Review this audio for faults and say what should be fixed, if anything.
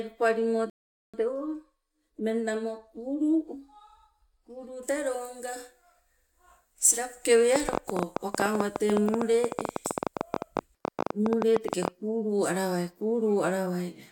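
At 0.70 s the speech drops to silence and picks up again at 1.14 s exactly where it left off, adding about 0.44 s with nothing lost. That is a rebuffering stall: the player exhausted its downloaded audio and waited for more. A larger playback buffer or a lower streaming bitrate would prevent it.

From 7.56 s to 11.89 s an uneven ticking rides over the speech and its pauses, about fifty similar clicks at around 13 per second, peaking roughly 15 dB above the speech. This train of clicks likely comes from electrical interference or a faulty connection or power supply. Shielding the cabling and checking the interface and its driver would stop it.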